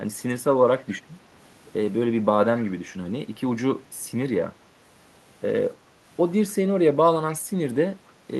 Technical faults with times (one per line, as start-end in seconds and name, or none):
0.79-0.93 echo leak
2.57-2.64 echo leak
7.32-7.39 echo leak